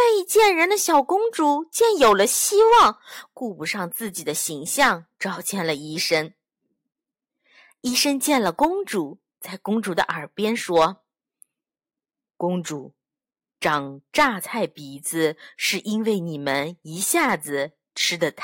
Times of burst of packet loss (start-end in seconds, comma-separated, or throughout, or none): none